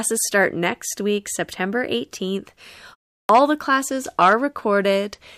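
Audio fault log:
2.11 s, pre-echo: a short hiss, about 13 dB above the surrounding floor, leads a sharp attack by roughly 16 ms, and the attack itself sounds softened. A transform coder spread its quantisation noise across a block of about 26 ms, so noise sized for the loud onset leaked into the quiet instant before it. The coder never seems to switch to short blocks. The noise comes before the onset, unlike ringing or smearing that trails it.
3.23 to 3.29 s, clipped start after a pause: after a 0.36 s pause, the sound resumes abruptly, with its first 62 ms swallowed. The output device went idle during the silence and needed time to wake before it passed audio again. What tells this fault apart from a plain dropout is that the audio is lost only at the restart after silence, never in the middle of continuous sound.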